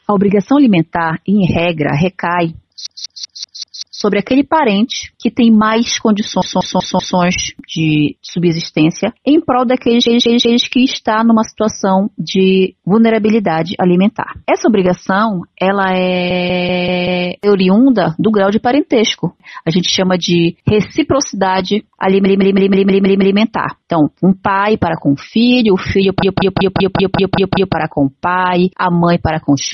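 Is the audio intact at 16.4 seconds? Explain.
No. The audio at 16.4 seconds falls inside a repeated frames fault running from 16.30 to 17.26 s. The same 192 ms block plays back-to-back, five extra times after the first, which fits a short run of compressed frames being written or delivered more than once before decoding. It is heard as a rhythmic stutter looping every 192 ms, and the duplicates lengthen the clip by 0.96 s.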